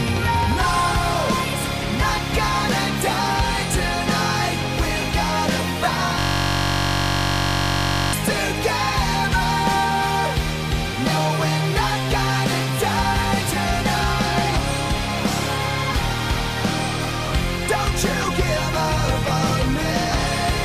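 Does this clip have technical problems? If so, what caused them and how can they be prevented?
Yes. A system hang loop: from 6.19 to 8.13 s the computer or audio driver froze while the sound hardware kept replaying one 21.33 ms stretch of its ring buffer, which fits a 1024-sample buffer, so the sound turns into a steady buzz at 46.9 Hz. Stable drivers, a lighter system load and a watchdog that mutes output when the audio stream stalls would prevent it.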